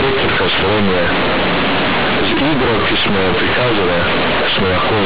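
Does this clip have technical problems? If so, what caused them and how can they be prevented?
Yes. Across the whole clip, the speech suffers from companded audio read as linear. The sound was stored as A-law bytes, but those bytes are played as plain 8-bit samples with no expansion. Every change of sign throws the output across roughly half its range. Quiet passages come out as loud as the peaks, and the waveform is badly bent. The result is very loud, buzzy distortion, with heavy noise filling the pauses. Underneath it, the telephone band still stops at 4 kHz. To prevent it, decode the A-law data to linear PCM before playback, or label the file so the player applies the right expansion.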